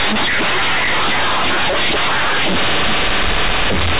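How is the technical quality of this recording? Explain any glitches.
Poor: the whole clip is heavily distorted by one fault. Throughout the recording, mu-law companded audio is read as linear 8-bit samples. Each logarithmic byte is taken as a plain sample value without being expanded back, so every change of sign swings the output across about half its range and quiet passages come out as loud as the peaks. The speech becomes harsh, very loud and buzzy, with strong noise filling the pauses. The narrow telephone band of the G.711 coding underneath can still be heard through the damage.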